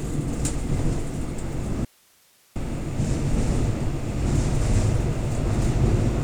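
At 1.85 s the sound drops out abruptly to faint hiss, about 35 dB down, until 2.56 s. It's likely an audio dropout to a faint residue, with the waveform collapsing to a thin noise band.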